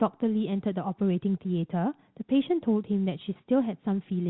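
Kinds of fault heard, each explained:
No faults heard in this speech clip; the narrow telephone-band sound of the G.711 coding is all that is present.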